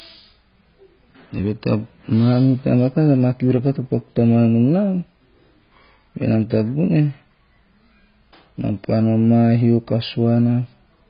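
From start to finish the speech is dull and band-limited, with nothing above 5 kHz. A spectrogram shows a hard ceiling there, and below it patchy, blocky energy with gaps between bands. The heavy smearing and watery, swirling texture on sustained sounds point to AAC compression, likely AAC-LC at a very low bitrate around 16 kbps. At that rate the encoder drops the top of the spectrum and quantises what remains coarsely.

From 6.54 to 6.58 s there is a short burst of hard clipping. The level drove a stage about 2 dB past its limit, so the loudest peaks were sliced off flat. On the waveform this appears as squared-off tops. On a spectrogram it is a thin vertical smear of added high harmonics. It is heard as a brief crackly, gritty edge on that peak.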